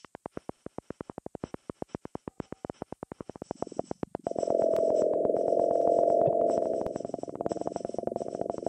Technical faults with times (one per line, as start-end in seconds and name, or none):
3.71-3.76 overlapping chunks
4.76-4.81 overlapping chunks
5.81-5.86 overlapping chunks
6.27-6.29 damaged data in a compressed stream
6.86-6.91 overlapping chunks